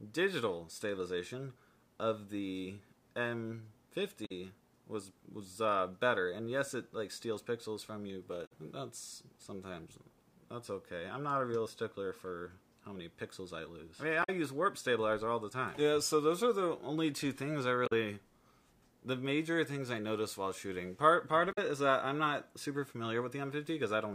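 Damaged data in a compressed stream causes short garbled blips at 4.25, 8.45, 14.23, 17.86 and 21.51 s, each about 70 ms, where corrupt frames throw the decoder off sync.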